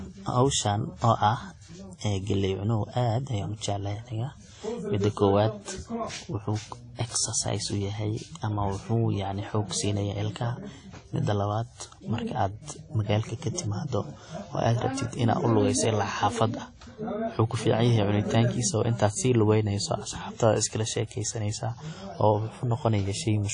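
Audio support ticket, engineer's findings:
Ringing, washy speech throughout; hiss breathing with the signal; nothing above 10.1 kHz. Likely WMA compression, consistent with a low bitrate near 32 kbps: long transform blocks smear quantisation noise over tens of milliseconds, and weak spectral lines are zeroed.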